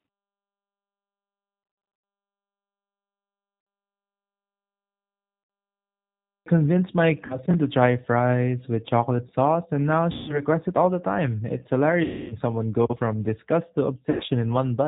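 The whole clip is coded with the G.729 codec at 8 kbit/s. Speech sounds band-limited, slightly rough and synthetic, with nothing above 4 kHz.

VoIP packet loss concealed by the speech codec breaks in at 1.64 to 2.04 s, 3.61 to 3.67 s, 5.44 to 5.50 s, 7.26 to 7.39 s, 10.12 to 10.42 s, 12.04 to 12.34 s, and 14.10 to 14.24 s. The decoder fills each gap by repeating its last pitch and filter. The sound smears into a fading buzzy tone or coloured noise. The first gap scatters 240 ms of loss over 400 ms. The 12.04 s gap loses 260 ms.

A clipped start after a pause comes at 5.82 s. The output device was still waking, so about 640 ms of speech is swallowed, and speech resumes abruptly at 6.46 s.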